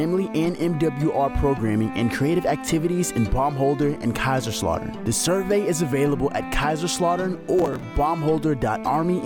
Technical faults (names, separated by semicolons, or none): processor overload crackle